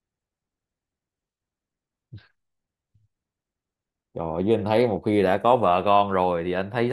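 No technical faults are audible anywhere in the speech.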